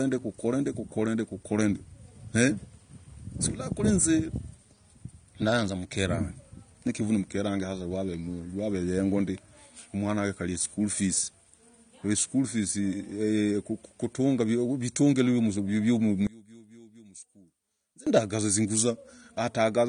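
Throughout, the speech sounds dull and smeared, with nothing above 9.7 kHz and a fizzy texture on sibilants. This is likely AAC compression, and the damage fits AAC-LC at about 32 kbps. From 16.27 to 18.07 s the speech falls by about 22 dB and turns faint as the content common to both channels cancels, likely because one channel is inverted.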